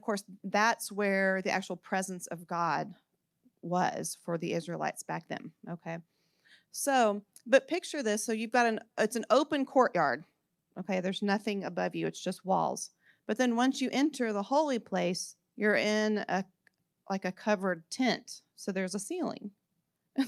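No technical faults are audible.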